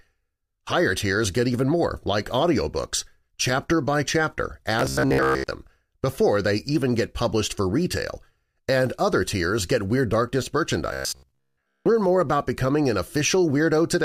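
A rigid, metallic buzz appears in the speech from 4.79 to 5.51 s, just after "audiobooks chapter by chapter", and again from 10.93 to 11.86 s, right before "more about becoming an". In both stretches a fixed pitch of about 66.8 Hz drones under the voice, which follows the words only loosely. This is robotic sound from repeated short buffers, likely from audio arriving too seldom so that a chunk of roughly 15 ms is looped while most of the real signal is skipped.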